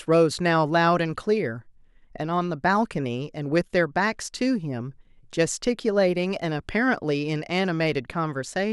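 No technical faults can be heard anywhere in this speech recording.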